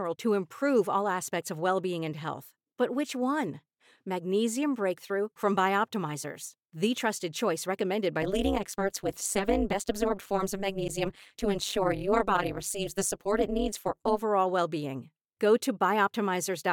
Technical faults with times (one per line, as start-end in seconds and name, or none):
8.22-14.22 overlap-add ripple